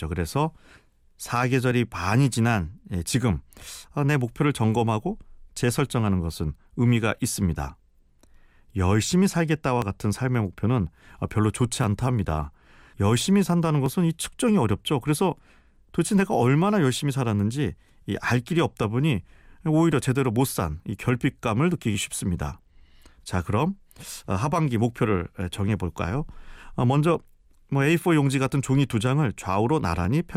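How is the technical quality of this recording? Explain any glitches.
The recording has a recurring glitch. From 1.71 s to 30.05 s, a short click sounds every 2.03 s, around fifteen times. These are likely clock drift buffer slips: mismatched device clocks, off by roughly 700 ppm, drop or repeat about 70 samples per slip.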